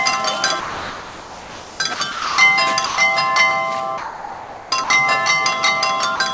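A recording of everyday sounds, carried over a call path whose band stops at 8 kHz, as G.722 at 64 kbps would produce, has stretches where the sound is replaced by steady comfort noise at 0.6–1.8, 1.94–2.0, 2.12–2.38, 2.86–2.98, 3.98–4.72, 4.84–4.9 and 6.16–6.2 s. This is sound dropped by the voice detector, likely because it took these passages for background. On a spectrogram they appear as flat, featureless noise bands; on the waveform they appear as low, even fill.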